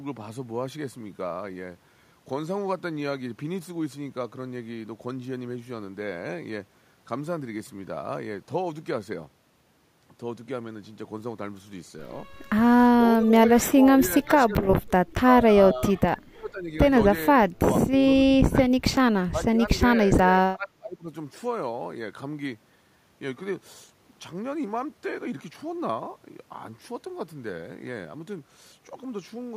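The speech dips by roughly 10 to 30 dB at 13.2, 13.61–15.54, 15.74–16.7, 17.34–17.68, 18.15–18.57, 19.31–19.68 and 19.93–21.09 s. That's likely speech suppressed in double talk, where the echo canceller confused this talker with loudspeaker echo and turned both down.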